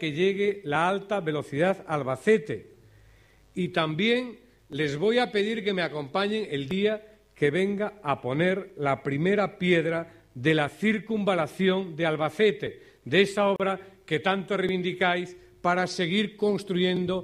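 At 13.56 s the sound cuts out for about 35 ms, with softened edges, then resumes where it stopped. This is a gap at a join of encoded pieces: separately encoded segments were spliced untrimmed, leaving encoder start delay and end padding as silence.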